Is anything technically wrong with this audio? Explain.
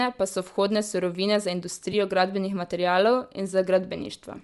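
Yes. Two faults are audible.

Throughout the speech there is plainly audible Bluetooth LC3 compression damage, likely from an LE Audio link. The encoder discards much of the upper spectrum and refills it with shaped noise, which gives the speech a breathy, grainy edge. The degree of damage fits a bitrate around 48 kbps with short 7.5 ms frames.

At 1.92 s there is a brief dropout from lost LE Audio frames, lasting about 15 ms, which fits two consecutive 7.5 ms frames. The LC3 decoder covers the gap by repeating the previous spectrum with randomised signs, so the sound briefly turns into a short noisy smear.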